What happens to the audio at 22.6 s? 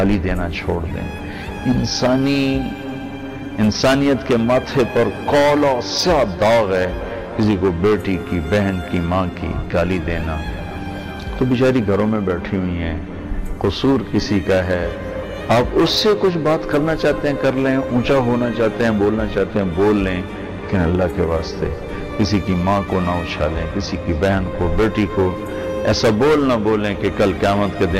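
Nothing goes wrong at 22.6 s; the audio plays through that moment intact, with no dropout, click or other fault.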